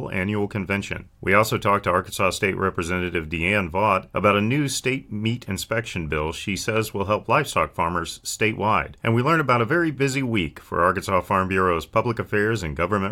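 No technical faults are audible.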